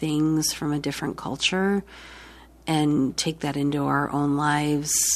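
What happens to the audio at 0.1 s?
Nothing goes wrong at 0.1 s; the speech plays through that moment intact, with no dropout, click or distortion.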